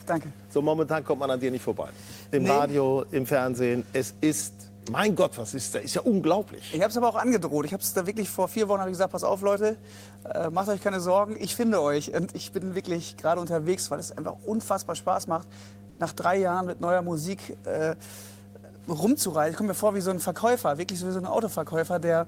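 Running under the whole clip there's mains hum, a steady low 50 Hz tone with a few low harmonics, sitting roughly 20 dB below the sound itself. That's power-line interference leaking in, most plausibly through a ground loop or a transformer sitting close to the gear.

Then from 15.89 to 15.99 s, a stretch of about 100 ms, the real background drops out and comfort noise stands in its place. You hear a flat, featureless hiss about 4 dB quieter than before. The likely cause is discontinuous transmission: the sender went quiet and the receiver filled the gap with synthetic noise.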